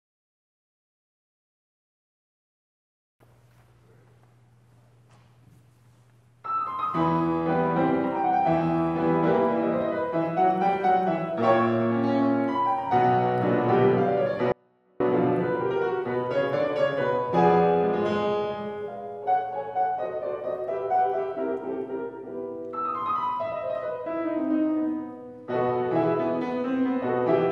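Audio with one audio dropout to a faint residue from 14.52 to 15.00 s: the sound cuts out abruptly, leaving only a faint leak far below normal level, likely a break upstream with the path still live.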